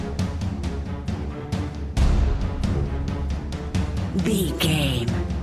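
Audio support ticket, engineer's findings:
No faults found in this audio.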